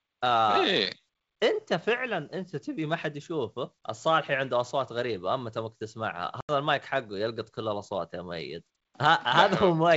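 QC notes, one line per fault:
6.41–6.51 s, packet loss on an ADPCM call: a sharp-edged 80 ms silent gap on the waveform, then speech resumes slightly distorted while the out-of-step decoder predictor resettles.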